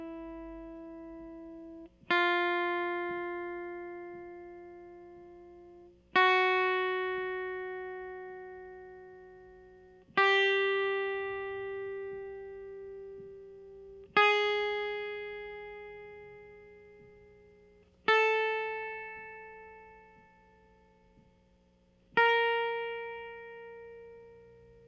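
No technical faults can be heard anywhere in the music.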